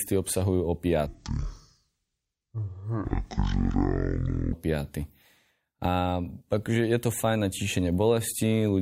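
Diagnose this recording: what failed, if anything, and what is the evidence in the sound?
Stereo read as mono, at the sample-format conversion stage: from 1.07 to 4.53 s the speech drops to half speed and a full octave down, 12 semitones. Interleaved left/right samples are being played back-to-back as one channel, doubling the length and halving every frequency.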